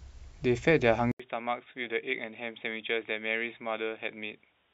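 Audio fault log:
1.12–4.74 s, input switched to a poorer device: after a gap of about 80 ms the speech turns dull and boxy, with nothing above 3.8 kHz, drops noticeably in level (roughly 10 dB) and sits on a faint new background noise. The likely cause is the recording input changing to another microphone or a headset call profile. Unlike a plain bandwidth or codec drop, tone, loudness and noise floor all change together at one switch and stay changed to the end.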